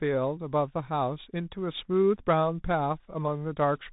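Throughout, the speech runs through a Bluetooth CVSD headset codec, encoding each sample as a single up-or-down bit, which fits a 64 kbps headset link. Nothing above 3.8 kHz survives, so the speech sounds narrow and boxy, with plainly audible scratchy, granular coding damage.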